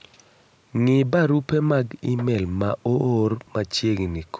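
Nothing stood out on listening to this speech, which carries the band-limited sound of a call's microphone processing, with nothing above 8 kHz.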